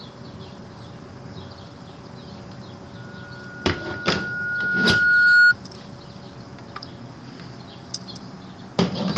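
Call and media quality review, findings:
Loudspeaker feedback squeal, 2.95–5.54 s: a single 1.4 kHz tone that swells over a few seconds until it sits about 15 dB above the surrounding audio. Likely cause is a microphone-to-loudspeaker loop with gain above one at that frequency. It grows from nothing, so it is not a steady interfering tone or a codec artefact. The call path's top end stops near 12 kHz, which fits a band-limited call codec.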